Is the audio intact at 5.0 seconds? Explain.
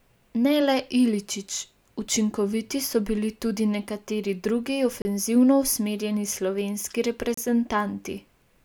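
No. Just after 5.0 seconds the speech drops out completely for about 31 ms, from 5.02 to 5.05 s, then resumes, with no fade at either edge of the gap. This is a Bluetooth stall, likely caused by interference holding up the wireless packets. The headphones' playback buffer emptied before the resent data arrived, so output went silent until the stream caught up and continued.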